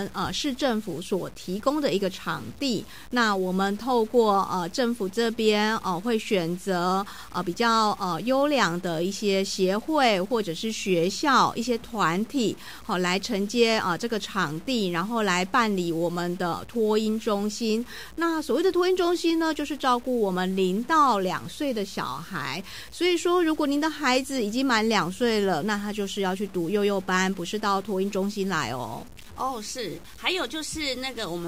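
From start to finish the sound carries a grainy distortion that rises and falls with the signal, likely low bit depth without dither, truncated to 7 bits. The error sits roughly 25 dB below the signal, and unlike steady hiss it vanishes in silences.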